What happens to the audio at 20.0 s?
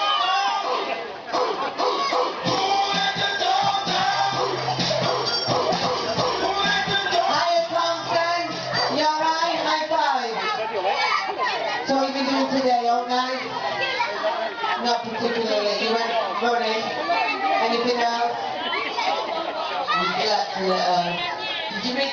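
At 20.0 s the gain pumping that runs through the whole clip continues. The gain ducks by around 15 dB under each loud sound, likely from a fast limiter fighting an overdriven input. Unlike a noise gate, the background never cuts to silence.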